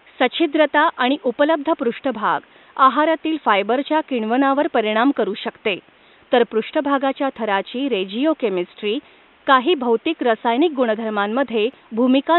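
No technical faults can be heard in the speech recording, and the only background is the room's own noise, sitting about 35 dB below the speech.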